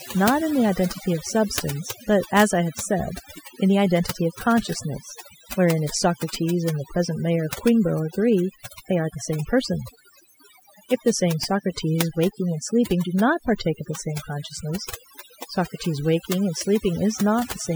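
Overdone noise removal runs through the whole recording. A noise reduction stage was pushed too hard on a noisy source, so any frequency band sitting close to its noise estimate gets pulled far down or shut off entirely. Quiet components of the speech fall below that threshold and vanish along with the noise. Between phrases the background collapses to near silence dotted with twinkling specks.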